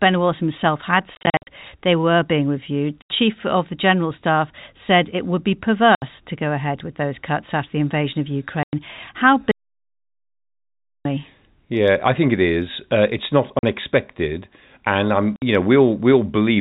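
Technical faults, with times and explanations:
1.15–1.47 s, 3.02–3.1 s (after "they were being reviewed"), 5.95–6.02 s (after "said it would be"), 8.63–8.73 s, 13.59–13.63 s (after "it's not"), 15.36–15.42 s: packet loss filled with silence. The speech is chopped by hard-edged holes. At 1.15 s, 210 ms of gaps, none longer than 50 ms, are scattered over 320 ms. Lost packets were replaced by silence, and every hole is a multiple of roughly 10 ms, which fits 10 ms packets.
9.51–11.05 s: audio dropout to silence. The speech cuts off mid-flow for about 1.5 s of silence with no room tone, then resumes abruptly. The likely cause is a lost input, such as a disconnected device or a failed link, while the recorder kept writing silence.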